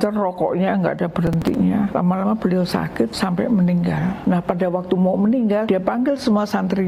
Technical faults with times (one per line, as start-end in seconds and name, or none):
1.27-1.55 processor overload crackle